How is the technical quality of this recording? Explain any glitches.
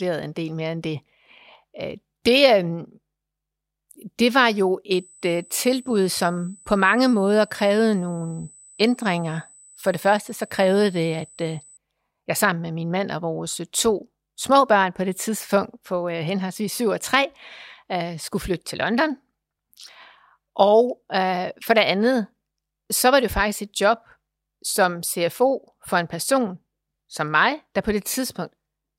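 The recording carries one clear fault: USB whine. From 4.91 s to 11.77 s, after "det var jo" and until "jeg sammen med min", a steady high tone at 8 kHz sits under the speech, roughly 30 dB below it. The pitch is fixed at 8 kHz, which is the repeat rate of USB's 125-microsecond microframes. The bus draws current in pulses at that rate, and those pulses have reached the audio path through shared power or ground.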